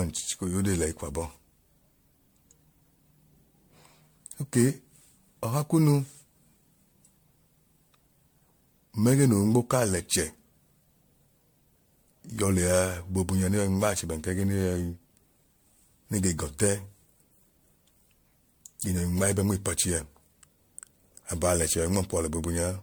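Throughout the speech there is generation loss: a swirly, hollow, smeared quality with softened consonant attacks, likely from around seven successive MP3 encodes. A single pass near 100 kbit/s with content reaching 20 kHz would sound cleaner, so these artefacts have compounded across passes.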